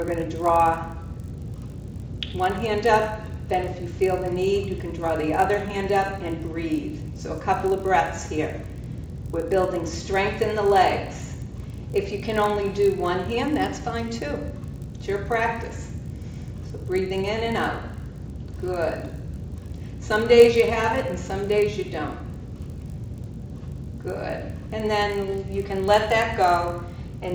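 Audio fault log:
throughout: resampler restarted on every block. The converter handled each 20 ms block in isolation, so every block edge carries a small interpolation error from missing neighbouring samples. The errors recur at 50 Hz, giving a buzz that follows the signal, which fits a 16 kHz to 48 kHz conversion.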